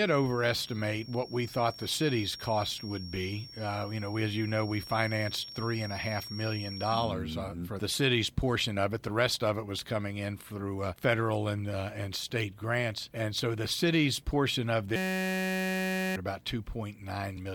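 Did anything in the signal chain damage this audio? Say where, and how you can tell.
Yes. From 0 to 7.15 s, a steady 5.5 kHz feedback whistle sits about 15 dB below the sound. It is likely an acoustic loudspeaker-to-microphone loop held just short of runaway.

At the driver or buffer stage, 14.96 to 16.16 s is a system hang loop. A 5.33 ms slice repeats as a 188 Hz buzz, which fits a 256-sample buffer, and about a second of audio is lost.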